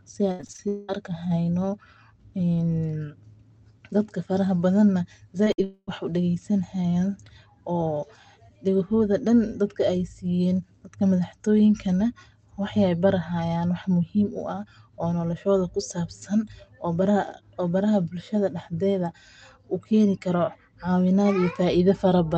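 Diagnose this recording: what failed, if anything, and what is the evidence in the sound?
The network stage is at fault, with repeated packet loss (robotic sound) right at the start, from 0.31 to 0.60 s. Five gaps fall inside that span, the longest about 76 ms. About half of it is made up by concealment, with each missing piece patched by extending the previous sound before the next hole arrives. The speech comes out choppy, with fragments missing, over an Opus call path whose band stops near 8 kHz.

A long network dropout is the likely cause of two longer holes, from 0.68 to 0.90 s and from 5.64 to 5.89 s. In the first, roughly 200 ms of audio is replaced entirely by synthesized continuation, a buzz or hiss that decays without ever reaching silence. The second covers about 240 ms; the concealment fades out and leaves roughly 30 ms of silence before real audio resumes further on. The material in between is simply gone.

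Short concealed packet loss occurs at 5.44 to 5.48 s, where about 20 ms never reached the decoder in time. The receiver extrapolates from the preceding sound, continuing its pitch if voiced and using shaped noise if not, then crossfades back into decoded audio. What remains is a brief smear or wobble.

A burst of packet loss follows at 5.52 to 5.60 s, where about 60 ms of consecutive audio is missing. The decoder holds the last sound and attenuates it across the gap, so a voiced segment becomes a sustained buzz and an unvoiced one a fading hiss. Playback then resumes later in the stream without the lost segment. Together with the nearby events, this marks a cluster of network trouble around 5.4 to 5.9 s.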